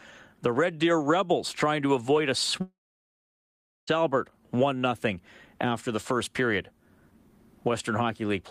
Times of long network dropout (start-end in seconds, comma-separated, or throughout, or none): 2.61-3.89